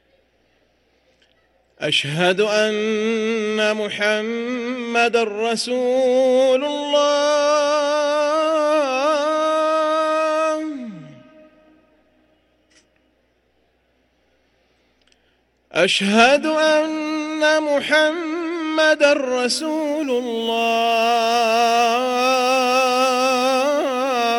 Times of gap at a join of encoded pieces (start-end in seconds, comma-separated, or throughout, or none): none